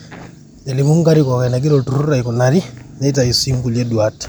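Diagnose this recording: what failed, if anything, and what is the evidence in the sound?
Nothing failed: the recording carries no audible fault at any stage, so there is no evidence in the sound to point to.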